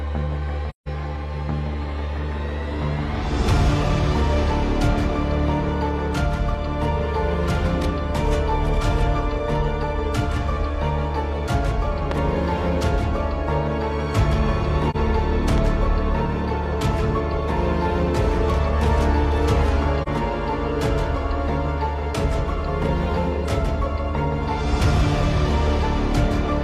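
At 0.69 to 0.88 s there is AAC frame loss with muting. The decoder zeroed the missing spectrum, leaving a soft-edged gap of about 0.17 s, consistent with four lost frames.

At 12.11 to 12.14 s a loud pop cuts in, peaking about 15 dB above the sound. It is likely a voltage pulse from a plug, switch or static.

At 14.90 to 14.96 s a shorter muted hole appears. It fades out and back in, consistent with one dropped frame.

At 15.58 to 15.60 s a second loud pop sounds, about 10 dB above the sound, which continues underneath.

At 20.03 to 20.08 s another brief muted dropout of about 43 ms follows.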